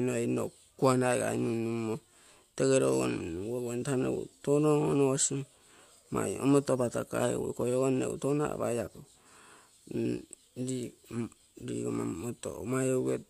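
A speech recording, and nothing is technically wrong with it.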